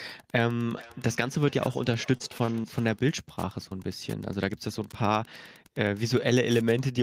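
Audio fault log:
Throughout: Wi-Fi interference. A steady tick recurs every 102.4 ms, close to ten a second, at about 30 dB below the speech. A nearby Wi-Fi radio's beacon and data bursts are being rectified by the audio circuit. Unlike packet-loss ticks, these keep a rigid clock whether or not anyone is speaking, and they sit underneath the speech rather than replacing parts of it.
0.67 to 3.02 s: feedback echo between two devices. Each stretch of speech comes back roughly 0.4 s later, thinner and more ringing on each pass. The loudest repeat is about 22 dB below the direct speech. A second device in the same room is replaying this microphone's signal, and the microphone picks it up again. The local echo canceller removes only its own playback. Room reverberation decays smoothly, but here distinct copies return at a fixed spacing.
2.17 to 2.66 s: repeated packet loss (robotic sound). Four gaps fall within half a second, totalling 60 ms of missing audio, with the longest gap 26 ms. 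About 84 ms, or 17% of the stretch, is synthesised by continuing the previous sound, which gives a choppy, robotic texture. This stretch overlaps the echo tail, but the damage differs from the echo. The speech itself breaks up, where the echo only adds delayed copies.
3.69 s: short concealed packet loss. About 20 ms never arrived and was patched with about 19 ms of extrapolated sound before blending back into the real signal. It is heard as a single brief smear or wobble. Because it is isolated, it does not produce the sustained robotic chop of the earlier run, and it is much shorter than an echo repeat.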